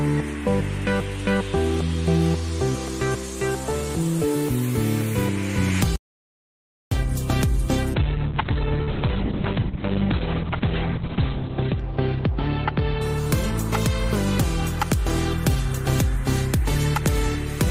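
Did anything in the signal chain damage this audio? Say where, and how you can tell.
Yes. Audio dropout to silence at the input stage from 5.96 to 6.91 s: nearly a second of silence with no room tone, likely a lost input while recording continued.

Call bitrate drop in the network and codec from 7.95 to 13.83 s: top end collapses from 20 kHz to 4 kHz, sounding muffled and watery. That fits bitrate falling from 40 to 6 kbps, bottoming out for about 3.3 s.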